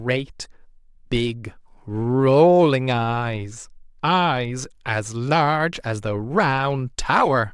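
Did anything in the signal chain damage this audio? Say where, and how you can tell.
No, no signal chain damage.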